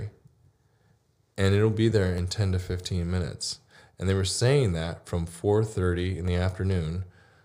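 From 0.81 s to 6.28 s, a click or pop recurs under the speech every 1.37 s, about five in all. This is the pattern of clock drift buffer slips. Two devices are likely running on separate clocks, off by around 500 parts per million. The buffer between them slowly drifts until a short block of a few dozen samples is dropped or repeated. Each slip breaks the waveform and is heard as a click.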